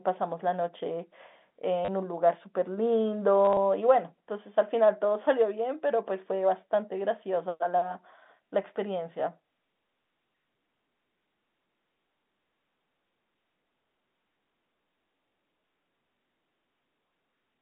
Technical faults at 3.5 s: packet loss with last packet repeated

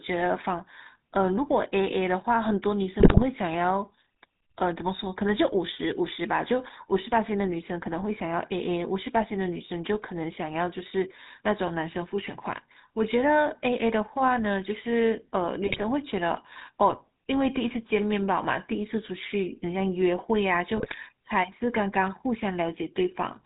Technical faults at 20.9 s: GSM full-rate codec; GSM bit errors

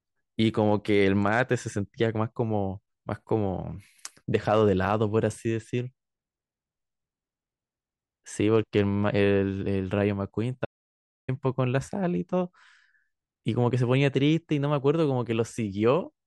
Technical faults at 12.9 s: none

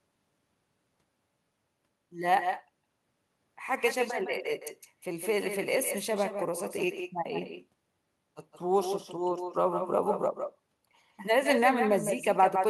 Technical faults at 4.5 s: echo with no canceller

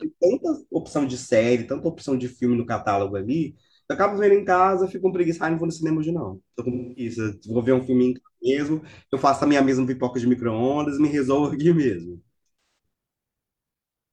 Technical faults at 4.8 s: none

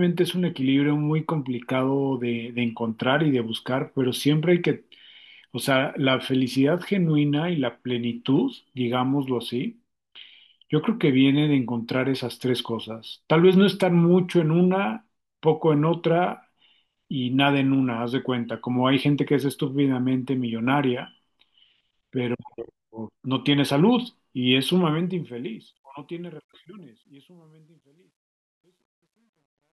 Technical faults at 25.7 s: truncation distortion on a fade

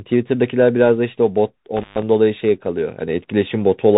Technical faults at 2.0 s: Bluetooth CVSD headset codec; intermittent contact

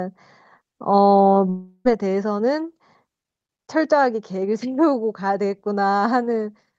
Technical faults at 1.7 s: long network dropout

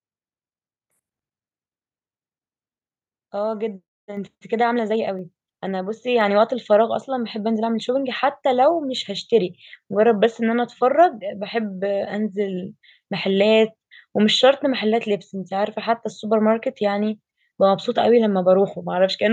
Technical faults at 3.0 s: none

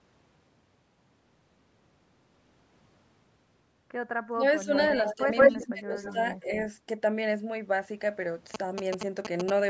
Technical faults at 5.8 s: echo leak; speech suppressed in double talk

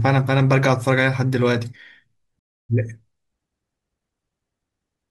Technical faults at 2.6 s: rebuffering stall

